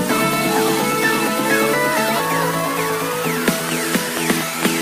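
At 2.19 to 2.21 s the sound jumps abruptly forward with no gap. This skip ahead dropped about 0.7 s of audio and joined the two sides almost directly. From 3.48 to 4.64 s a train of clicks, around seven similar pops, ticks steadily at 4.35 per second, roughly 15 dB above the sound. The likely cause is interference or a faulty connection or power supply.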